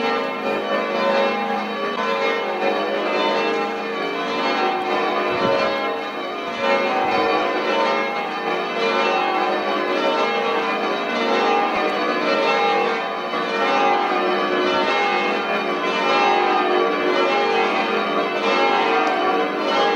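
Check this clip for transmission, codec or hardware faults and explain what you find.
Two brief glitches stand out, at 1.95–1.98 s and 11.74–11.77 s. Each is a sudden forward jump with a short chirp, noise burst or short hole. The likely cause is a broken MP3 bit reservoir: after lost frames, the next frame looked back for its data and found bytes of another frame. The roughly 30 ms span fits about one 26.1 ms frame. The waveform shows a discontinuity.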